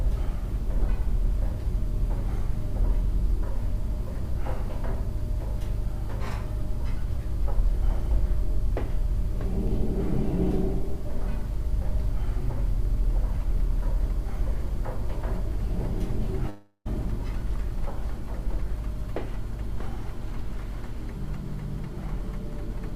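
At 16.49 s the audio stops arriving and the receiver fills the gap by extending the last sound as a fading buzz or hiss for about 0.36 s, then about 60 ms of silence follows. This is likely a long network dropout; playback resumes at 16.87 s with roughly 0.36 s missing.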